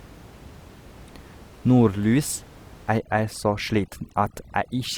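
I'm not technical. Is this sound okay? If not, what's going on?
No. From about 2.98 seconds to the end, the recording suffers from overdone noise removal. A clean-up tool pushed too hard shuts off parts of the sound it mistakes for background hiss, and quieter parts of the speech go too. The gaps fill with faint twinkling specks. Unlike a dropout, the sound never cuts out completely. Before that point, the ordinary room noise sits well below the speech.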